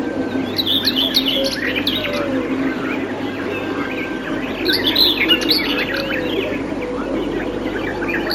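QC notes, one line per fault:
Throughout, imaging from linear upsampling: straight-line interpolation from 16 kHz to 44.1 kHz leaves the top of the band dulled and faint mirror images between 8 and 16 kHz, roughly 25 dB down, giving a slight metallic shimmer. On a spectrogram, a dim reflected copy of the content appears above 8 kHz.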